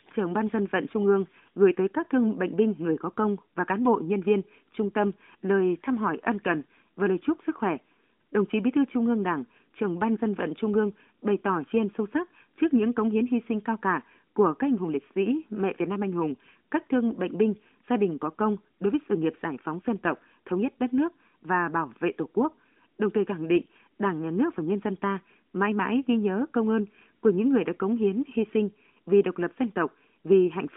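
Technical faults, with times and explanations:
None found; the speech carries a normal narrowband mobile-line character, confined to a 200 Hz to 3.5 kHz band with nothing above 3.7 kHz and only light coding texture, which fits AMR-NB at 12.2 kbps.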